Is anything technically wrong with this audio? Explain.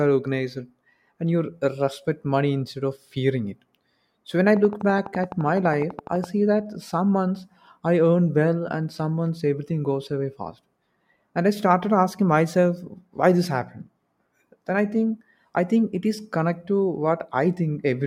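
Yes, there are two faults.

From 4.57 to 6.25 s, just after "when I", there is a train of clicks. About twenty near-identical pulses arrive at a steady 11.9 per second, peaking about 5 dB above the speech. The likely cause is electrical interference or a faulty connection or power supply. It sounds like rapid, even ticking laid over the speech.

From 5.92 to 5.94 s, inside that clicking, there is AAC frame loss with concealment. About 21.3 ms of audio is missing, which fits one lost frame. The decoder filled the gap by reusing the last good spectrum. The result is a brief smeared, phasey blip.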